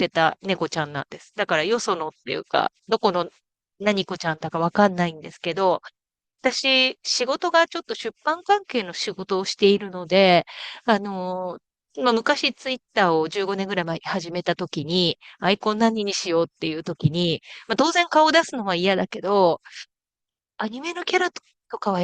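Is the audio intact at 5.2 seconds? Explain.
Yes, the speech at 5.2 seconds plays through intact, with no dropout, click, distortion or other fault at that moment.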